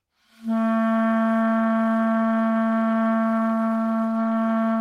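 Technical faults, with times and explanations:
No technical faults detected anywhere in the audio.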